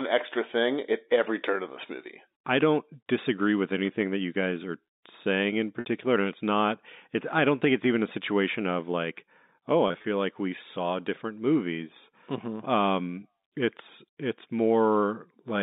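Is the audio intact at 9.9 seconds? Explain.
No. Between 9.88 and 10.04 s, packets went missing, about 80 ms scattered over 160 ms in gaps no longer than 20 ms, which fits four lost packets. This is packet loss with pitch repetition: the receiver replayed the last pitch period in each gap, so the sound briefly holds with a slight buzz.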